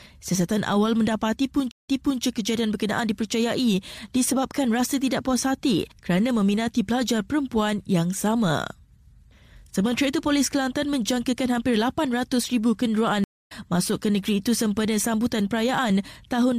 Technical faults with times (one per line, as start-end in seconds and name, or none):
1.71-2.22 stream reconnect
13.24-13.52 stream reconnect